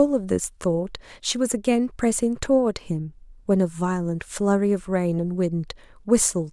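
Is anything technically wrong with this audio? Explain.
No, nothing is technically wrong with this audio.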